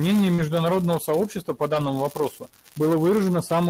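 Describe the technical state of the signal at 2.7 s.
At 2.7 s the speech signal is intact, with no audible dropout, distortion, glitch or other technical fault at that moment.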